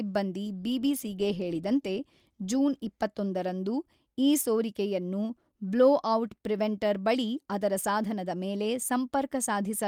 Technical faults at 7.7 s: none

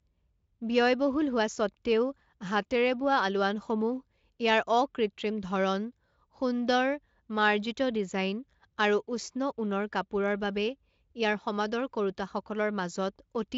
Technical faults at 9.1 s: none

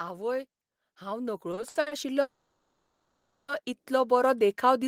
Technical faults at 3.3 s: automatic gain rising; call audio freeze

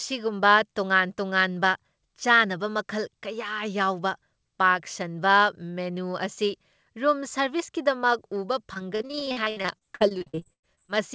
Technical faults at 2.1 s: none

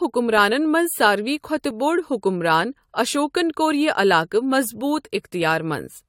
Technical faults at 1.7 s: overlap between stream segments

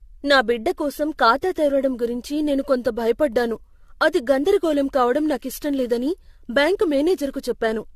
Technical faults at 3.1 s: generation loss

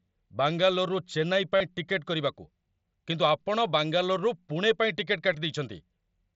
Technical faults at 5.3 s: concealed Bluetooth headset packet loss

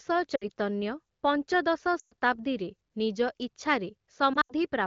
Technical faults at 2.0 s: lost AMR speech frames

